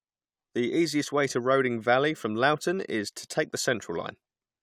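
No technical faults detected.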